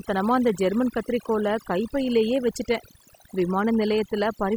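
Overdone noise removal runs through the whole speech recording. A noise reducer set too hard pulls individual frequency bands down or out whenever they sit near its noise estimate, taking quiet parts of the voice with them, so gaps sparkle with twinkling specks.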